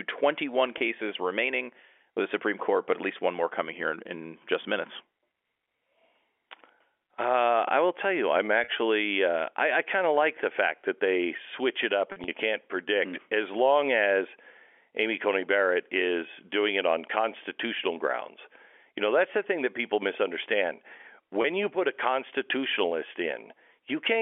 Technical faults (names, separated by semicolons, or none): packet loss with pitch repetition